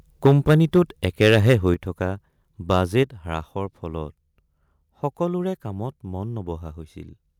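From 0.25 s to 1.72 s the speech has a harsh, crackling edge on its loudest syllables: the peaks are flattened, about 8 dB beyond full scale, with roughly 2 percent of the waveform squared off. This is microphone overload, likely from an input gain set too high so that the converter runs out of headroom and cuts the tops off the waveform.

At 0.27 s, just after the first flattened peaks, speech and background drop together by about 2 dB. A larger drop of about 6 dB follows at 1.74 s, right as the distorted stretch ends. Both are the microphone volume stepping down, likely the call software reacting to the overload by lowering the device input gain in a single step, which shows up as an abrupt change in level rather than a fade.

Between 2.71 s and 2.99 s the clipping returns in milder form, about 3 dB over, with under 1 percent of samples flattened. At 3.03 s the microphone volume steps down again, by about 4 dB.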